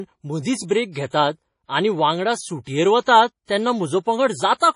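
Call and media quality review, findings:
Watery, swirling speech throughout, treble gone above 10.5 kHz, attacks smeared. Likely MP3 compression at heavy damage, consistent with roughly a 32 kbps encode: weak frequency lines dropping in and out between frames, top band cut to save bits.

Pre-echo at 3.04–3.07 s and 3.45–3.49 s: brief hiss of about 35 ms before sharp onsets, which sound softened. The codec's quantisation noise is spread across each transform block, so noise sized for the attack leaks into the quiet just before it.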